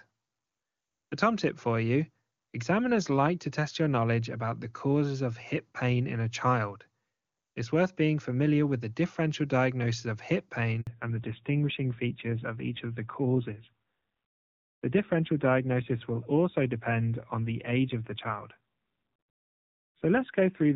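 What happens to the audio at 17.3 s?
Fallback to narrowband is in effect at 17.3 s, a drop that begins at 10.87 s, just after "differential diagnosis of hip", and lasts to the end of the clip. The call has left the wideband HD Voice path, whose speech sounds clean before the switch, for an older narrowband codec, so nothing above 4 kHz survives. The speech sounds duller and rougher, and the rasp points to a low-rate mode, around 7.4 kbit/s.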